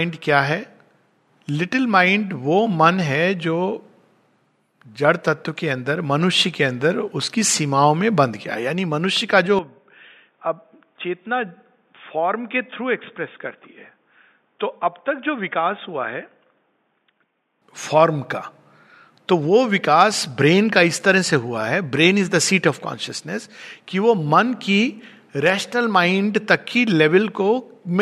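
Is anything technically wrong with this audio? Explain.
Yes. From 9.59 to 17.62 s the input has likely switched to a poorer device. That path passes nothing above 3.6 kHz, so the sound turns dull and boxy, drops roughly 5 dB, and gains a faint new noise floor. On a spectrogram the top band vanishes abruptly, with no gap at either switch.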